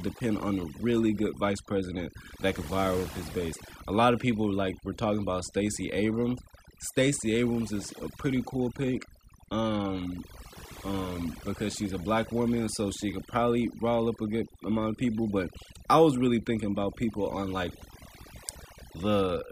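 A speech recording whose noise reduction was pushed far too hard across the whole clip, so this is overdone noise removal. The processor treats any frequency band sitting close to its noise estimate as unwanted and pulls it down almost to nothing, and the softer parts of the speech fall below that threshold along with the noise. Between phrases the background collapses into near silence flecked with twinkling specks.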